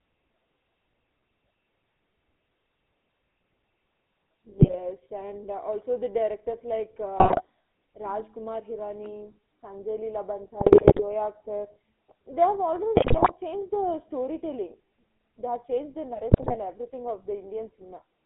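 GSM full-rate codec damage runs through the whole of this speech recording: the voice has a buzzy, gravelly roughness from a vocal-tract model driven by sparse regular pulses, and the band sits between about 250 Hz and 3.7 kHz, which fits 13 kbps full-rate coding. GSM bit errors strike at 4.58–4.76, 7.17–7.42, 10.60–11.02, 12.96–13.33 and 16.31–16.56 s, where corrupted filter, pitch and gain values make the decoder squawk, pop and gargle for 8 to 21 frames at a time.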